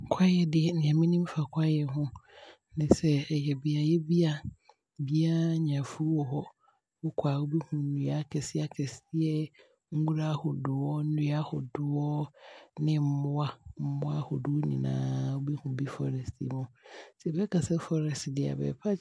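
No technical faults can be heard anywhere in the speech. Nothing in the recording calls for a time or a description.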